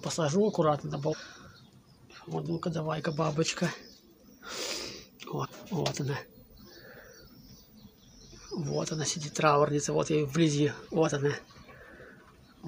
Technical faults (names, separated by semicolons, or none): damaged data in a compressed stream